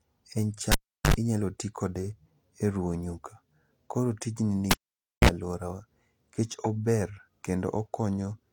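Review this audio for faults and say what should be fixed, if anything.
Cable pulled and plugged in at 0.72–1.14 s and 4.71–5.29 s: a pop, near-silence for 372 ms and 530 ms, mains buzz (50 Hz for 66 ms, then 60 Hz for 43 ms) as the tip touches, and another pop. The paired pops and buzz set it apart from a plain dropout. Secure connectors and mute the channel before repatching.

Repeated buffer at 6.52 s: a 5.8 ms piece, which fits a 256-sample buffer, plays twice more with hard joins, heard as a brief click-buzz. Unlike a dropout, essentially nothing goes missing. Enlarge the buffer or lighten the processing load so audio arrives in time.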